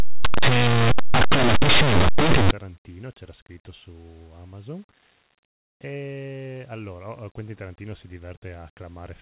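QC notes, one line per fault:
0.00–2.51 s, linear audio read as companded: the opening is a loud, harsh distortion, like a buzzing roar sitting on top of the sound, and it clears just before "c'era scritto su". Plain linear 8-bit samples in this stretch were decoded as if they were mu-law codes. Small values just to one side of zero expand into the largest outputs while those on the other side stay tiny, so the signal becomes a lopsided, clipped-sounding wall of noise.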